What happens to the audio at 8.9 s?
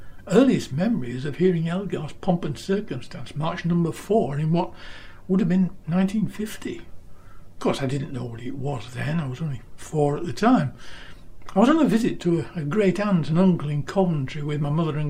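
At 8.9 s the audio is inside a stretch of crude rate conversion running from 1.14 s to the end. Samples were linearly interpolated with no filtering, which fits a 44.1 kHz to 48 kHz change. The residue sits roughly 45 dB down, a faint gritty fizz riding loud and high content. Unlike clipping or harmonic distortion, its tones are inharmonic and unrelated to the material's pitch.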